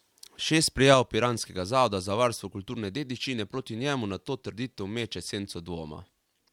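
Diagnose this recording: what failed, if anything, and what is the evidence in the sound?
At 0.94 s the speech and the background noise drop together by about 4 dB in a single step, and the lower level holds for the rest of the recording. Because the noise floor falls along with the speech, the level change came from the signal path, not the talker. This is a sudden gain jump in the digital processing stage, likely a gain setting applied from one sample to the next with no ramp to smooth the transition.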